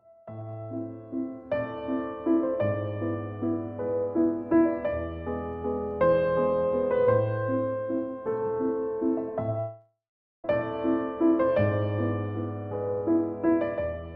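A long network dropout from 9.59 s to 10.45 s: the last sound is stretched into a fading buzz, then about 0.45 s of silence, and the audio resumes with roughly 0.85 s lost, most likely from packets that never arrived.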